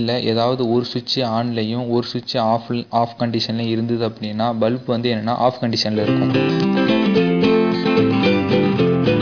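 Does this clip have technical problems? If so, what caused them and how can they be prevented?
No, nothing here needs fixing, so there's nothing to prevent either.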